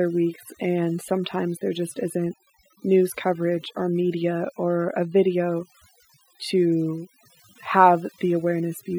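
Throughout the speech, the background drops to near silence scattered with twinkling specks. This is overdone noise removal: the noise reduction was set too strong, shutting down frequency bands near its noise estimate and taking quiet parts of the voice with them.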